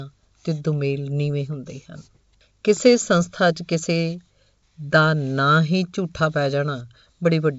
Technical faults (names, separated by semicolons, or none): none